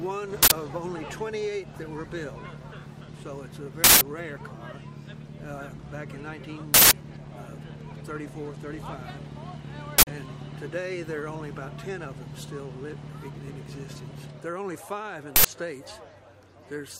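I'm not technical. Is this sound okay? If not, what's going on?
No. There are five short bursts of harsh digital noise, at about 0.43, 3.84, 6.74, 9.98 and 15.36 seconds. This is an uninitialised buffer fault. The playback system sent out a block of memory before any audio had been written into it, so leftover data was played as sound. The bursts at 3.84 and 6.74 s last about 0.17 s. The others last about 0.085 s, which fits blocks of 4096 and 8192 samples.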